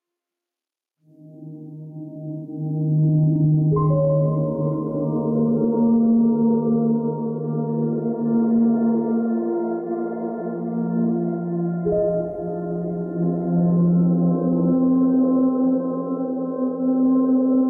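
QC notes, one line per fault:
throughout, gain pumping: gain swings by roughly 10 dB, pulling loud and soft parts closer in level, likely from excessive input gain driving a fast limiter.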